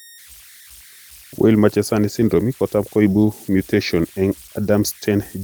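Converter idle tones run through the whole speech clip: an undithered converter cycles through fixed bit patterns on quiet input, leaving tones around 2 kHz, about 26 dB below the signal, heard in pauses rather than as steady hum. At 3.21–3.23 s and 4.63–4.69 s, a lost packet is rebuilt from error correction. The decoder substitutes low-bitrate copies, which fits one and then two lost packets. The result is 20 ms and 40 ms of rougher, noisier sound with no gap or fade-out.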